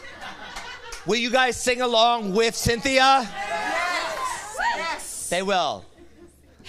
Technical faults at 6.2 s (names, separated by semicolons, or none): none